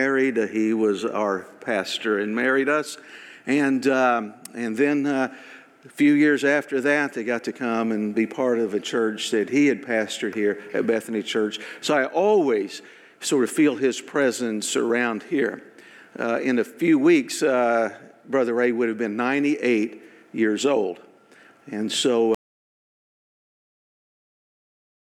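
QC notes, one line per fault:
22.35 s to end: audio dropout to silence. The sound cuts off abruptly and the remaining 2.8 s is silence, with no room tone or noise floor underneath. This likely points to the input being lost while the recorder kept writing silence until the file closed.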